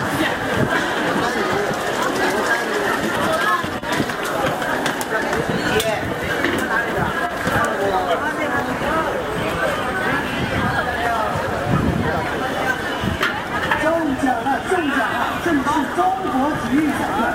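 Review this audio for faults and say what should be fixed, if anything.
Sample clock jitter runs through the whole recording: the converter's clock wanders by a few microseconds rms, so each sample is taken slightly early or late at random. Because the resulting error scales with how steeply the waveform is changing, it sits roughly 30 dB below the signal, rising as a hiss or roughness on loud and high-pitched moments of these sounds and disappearing when the audio goes quiet. To prevent it, clock the converter from a stable, low-jitter source.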